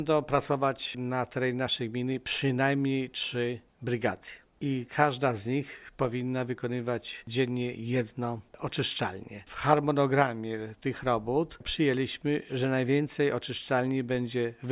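No technical faults are audible.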